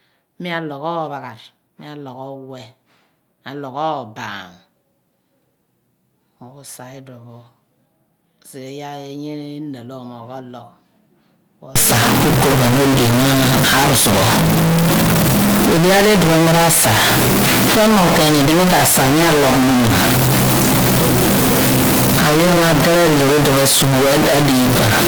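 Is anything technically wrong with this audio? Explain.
Yes. From 11.76 s to the end, the speech is distorted, and the pauses fill with noise. The likely cause is a stuck bit: one data bit fixed at 0 or 1, shifting about half the samples by its weight. Clipping would distort only the loud peaks, but this also fills the silences.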